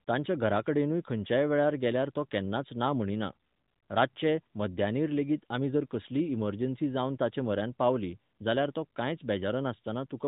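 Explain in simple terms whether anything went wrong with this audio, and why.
Nothing went wrong here; no faults can be heard.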